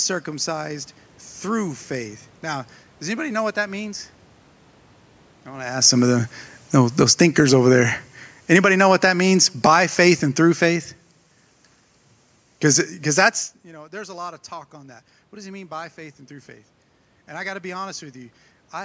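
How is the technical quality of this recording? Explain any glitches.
The speech has one gain fault. From 5.7 to 13.39 s, automatic gain falling: the automatic gain control judged the input too loud or its background noise too strong and pulled its gain down gradually by about 12 dB. The voice and the room noise behind it sink together, with no sudden step. The level shifts near 5.5 and 13.5 s come from the talker moving relative to the microphone.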